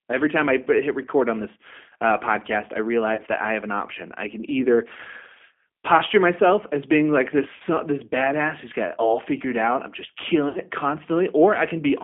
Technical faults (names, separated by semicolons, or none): G.729 codec; VoIP packet loss concealed by the speech codec